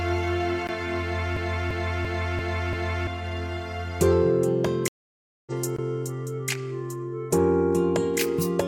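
At 0.67 s a brief tick marks a block of digital silence: the sound dropped to silence with no fade, likely an output buffer that went unfilled in time.

From 1.37 to 3.07 s a 341 ms slice repeats five times, a stutter at about 2.9 Hz. This is a system hang loop: the hardware kept cycling a buffer that fits 16384 samples while the system froze, losing about a second and a half.

From 4.88 to 5.52 s there is a stream reconnect. The sound stops for 585 ms, then resumes roughly 0.7 s further along after the connection dropped and a fresh decoder restarted.

Between 5.76 and 5.79 s a second block of digital silence gives a short 21 ms hole, which fits a 1024-sample block left empty.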